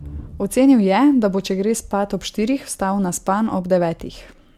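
Speech recording with no audible technical faults: no dropouts, level problems, distortion or timing errors anywhere in the clip.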